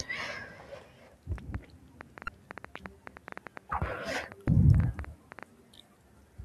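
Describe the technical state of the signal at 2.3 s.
At 2.3 s a train of clicks is running, from 1.38 to 5.44 s. Around 40 sharp ticks arrive at an uneven pace, near 7.6 per second. They peak about 10 dB above the speech. Interference from nearby equipment or a faulty connection or power supply is the likely source.

Just before, from 2.25 to 2.28 s, there is damaged data in the compressed stream. Corrupted bytes made the decoder misread those frames and hunt for the next valid header. The result is a brief glitch in the sound.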